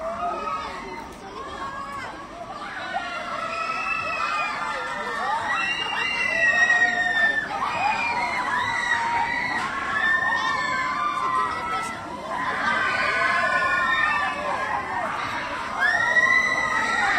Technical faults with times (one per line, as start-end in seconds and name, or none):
none